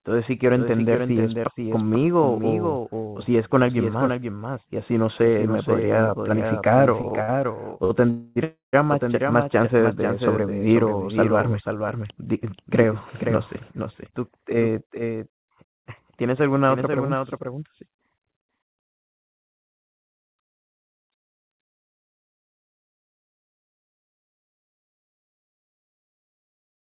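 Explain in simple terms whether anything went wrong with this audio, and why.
Several things went wrong in this speech recording.

Throughout the clip there is a doubled audio track. A second copy of the same speech plays about half a second behind the first, only a little quieter. It is clean and dry, with no echo tail or room sound, so it is not a real echo. The likely cause is the sound being picked up twice, once through a slower route, and both copies being mixed together.

From 7.02 to 7.92 s there are repeated stalls, or stutter. The audio stopped four times in under a second, the longest stop lasting about 56 ms. Each time, the receiver stretched the last bit of sound to fill the wait. Nothing is lost, but the speech catches and drags. This happens when packets of audio keep arriving late over the network.

Right after that come two call audio freezes. The first runs from 8.10 to 8.38 s and the second from 8.44 to 8.75 s. 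In each, the audio holds on its last sound as a fading buzz or hiss. In the second freeze it fades into about 150 ms of silence. Then the speech picks up where it left off, so a pause has been added. The likely cause is packets being held up on the way.

There are also two jitter buffer speed-ups. From 13.14 to 15.28 s the speech runs about 7% fast, and about a seventh of a second is cut out. From 19.75 to 23.40 s it runs about 3% fast, and about a tenth of a second is cut out. The pitch stays the same, but in the first one the talking sounds slightly hurried. The receiver had built up too much waiting audio and trimmed many tiny slices to catch up.

The sound also has nothing above 4 kHz, which is normal for this kind of phone-call link.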